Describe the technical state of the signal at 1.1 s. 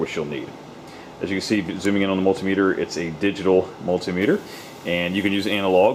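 The signal at 1.1 s is intact, with no audible fault at that point.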